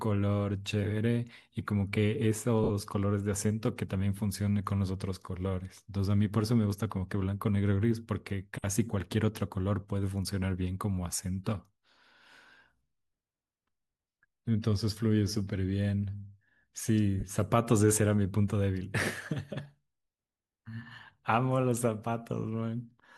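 Lost LE Audio frames break the speech at 2.64–2.71 s (60 ms), 4.17–4.19 s, 8.62 s and 17.20–17.23 s. Each gap fits whole 10 ms frames. The decoder repeats the last spectrum with scrambled signs, so the sound smears into a brief noisy blur rather than dropping cleanly to silence or clicking.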